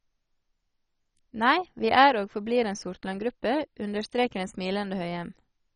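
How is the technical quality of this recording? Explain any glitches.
The technical quality is poor throughout, with heavy coding damage from start to finish. The speech is dull, with nothing above about 10.3 kHz, and it carries a gurgling, granular roughness. This likely comes from MP2 compression at a very low rate, which fits a bitrate around 32 kbps. Layer II divides the spectrum into 32 equal sub-bands and cannot fund them all. Upper bands switch off and flicker back, and the surviving ones are quantised coarsely. Unlike a plain low-pass filter, the top edge wavers and the grain sits inside the remaining band. That grain is the familiar low-rate digital radio sound rather than MP3's swirly, metallic artefacts.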